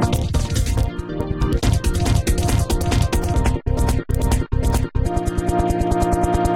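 No technical faults can be heard in this recording.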